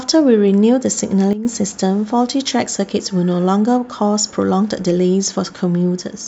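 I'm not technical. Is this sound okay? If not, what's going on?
No, there's a problem near the start. From about 1.33 to 1.45 seconds the level suddenly drops to roughly a quarter as loud, then comes back up. That's a sudden gain jump: the voice and the background noise shift together, instantly, with no smooth fade. It's likely a volume setting that got applied all at once instead of being eased in, so the loudness changes from one moment to the next.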